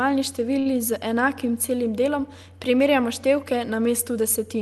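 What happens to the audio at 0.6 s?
A short stall from a late packet occurs from 0.59 to 0.68 s. A packet arrived late and the jitter buffer ran dry, so the receiver stretched the preceding speech for about 59 ms. Nothing is lost, but the sound is held unnaturally long, and everything after it runs about 59 ms later.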